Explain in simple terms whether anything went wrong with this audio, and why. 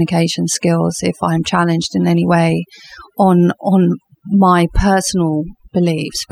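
Something did go wrong here, and it runs through the whole clip, start to finish. It's overdone noise removal. A noise reduction tool was cranked up too far, so whenever parts of the sound got close to what it judged as noise, it cut them hard. The background drops and breaks up into little twinkly specks, and the quieter bits of the speech get dragged down too.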